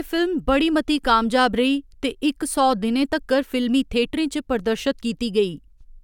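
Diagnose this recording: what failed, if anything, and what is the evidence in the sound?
Nothing in this recording points to a failure at any stage of the chain. Listening through the speech turns up no event to place in time and no evidence of a fault to diagnose.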